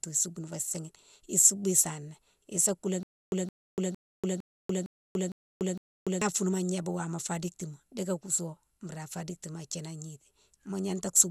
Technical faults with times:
0.00-11.31 generation loss
3.03-6.21 stutter with silent gaps

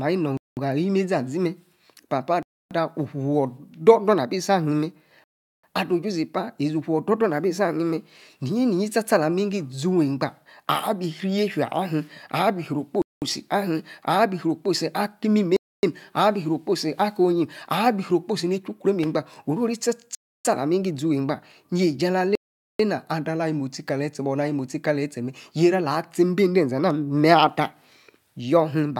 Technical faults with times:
0.37-0.57 Bluetooth stall
2.43-2.71 Bluetooth stall
5.24-5.63 Bluetooth stall
13.02-13.22 Bluetooth stall
15.56-15.83 Bluetooth stall
20.15-20.45 Bluetooth stall
22.35-22.79 Bluetooth stall

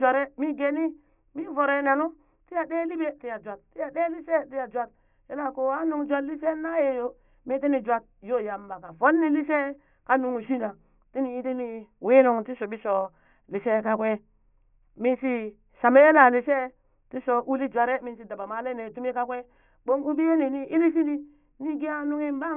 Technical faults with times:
none

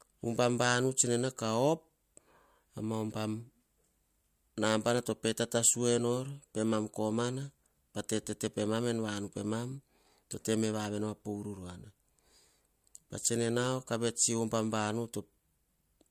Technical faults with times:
none

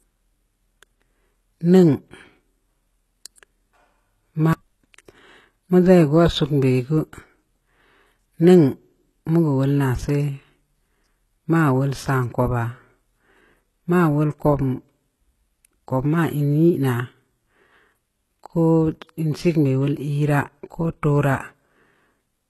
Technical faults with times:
0.00-22.50 HE-AAC compression

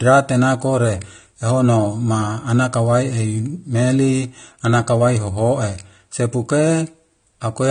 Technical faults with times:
0.00-7.71 AAC compression

